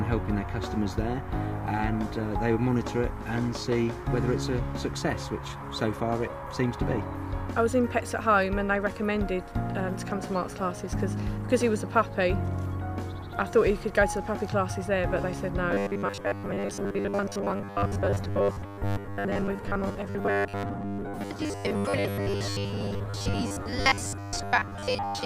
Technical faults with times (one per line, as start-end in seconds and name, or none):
15.71-25.25 robotic sound from repeated short buffers